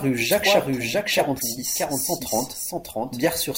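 Throughout the speech, a doubled audio track is heard: a second full-band copy trails the original by about 0.7 s, some 5 dB quieter, with no decay or room colour. This is likely from a second, slower capture path or misaligned edit. At 1.38 to 1.42 s, a corrupt frame decoded produces a short, fairly loud chirp, consistent with a single damaged compressed frame whose misread codes put energy at wrong frequencies. A much fainter blip follows at 2.69 to 2.72 s, spanning what sounds like a couple of frames.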